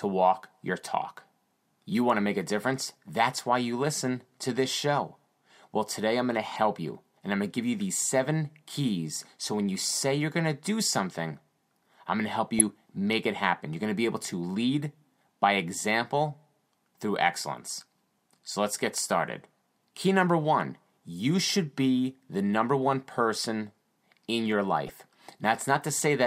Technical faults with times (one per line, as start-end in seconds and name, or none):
6.46-6.58 DAB burbling
12.59-12.61 DAB burbling
18.96-18.99 DAB burbling
24.87-24.90 DAB burbling